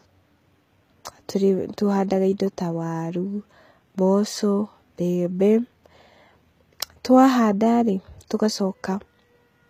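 Speech runs throughout with plainly audible HE-AAC compression damage, likely from a low bitrate of around 20 kbps. The treble stays bright up to a cut-off at 14.8 kHz, but s sounds come out gritty and lispy, which sets it apart from ordinary low-rate coding that simply dulls the top end.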